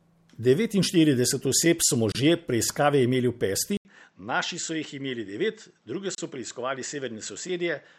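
At 2.12 s the speech drops out for about 28 ms, a gap at a join of encoded pieces. Separately encoded segments were butted together without trimming the encoder's start-up delay and final-frame padding, so a short hole of silence sits in continuous sound, its edges smeared by the codec, before the sound resumes where it left off. The same defect returns at 6.15 s, lasting about 32 ms, consistent with joins every 4 s.

From 3.77 s to the end, the sound turns duller and boxier. It follows an 80 ms silence, drops roughly 10 dB in level, and loses everything above 7.9 kHz. A new noise floor sits around 40 dB under the signal. The likely cause is an input switched to a poorer device, such as a different microphone or a headset in call mode, with a narrower band, its own coloration and its own background noise.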